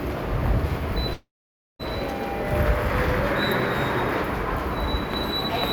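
At 1.13 s the sound breaks off until 1.81 s. The last sound carries on as a fading tail, then 0.52 s of near silence follows. This is likely a long network dropout. The receiver got no audio and filled the gap. The missing 0.66 s never returns.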